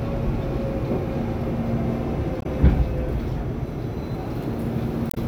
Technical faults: damaged data in a compressed stream

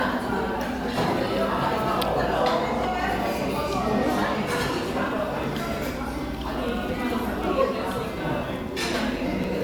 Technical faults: periodic USB or driver dropouts

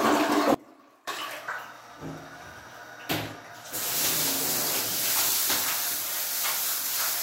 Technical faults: audio dropout to a faint residue

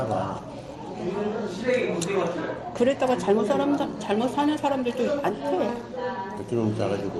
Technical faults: skip ahead; jitter buffer speed-up

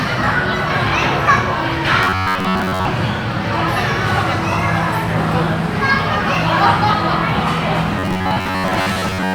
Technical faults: robotic sound from repeated short buffers

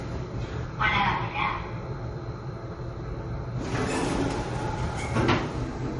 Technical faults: transcoding between lossy codecs

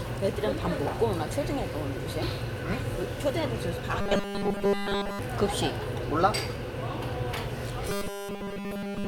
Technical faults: robotic sound from repeated short buffers

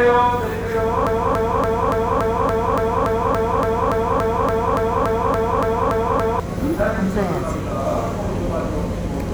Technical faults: broken-record loop

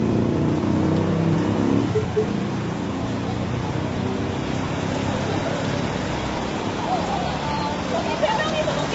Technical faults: low-delay AAC compression; periodic USB or driver dropouts

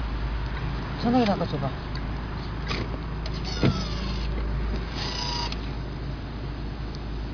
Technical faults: none

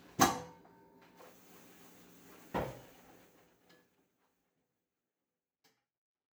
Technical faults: none

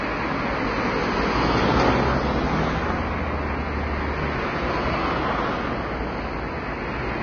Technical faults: Vorbis compression

